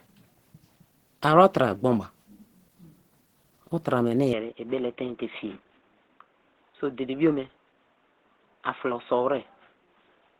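Speech that sounds grainy and hoarse from start to finish, with a rough, noisy texture clinging to the voice: the signature of likely Opus compression at a low 16 kbps, where the encoder runs in its hybrid speech mode and fills starved bands with noise instead of detail. From 4.33 s to the end the sound abruptly turns dull and boxy, losing everything above 3.8 kHz, with no gap at the switch, no real change in level and a faint new background hiss, consistent with the input being switched to a poorer device such as a headset's call profile.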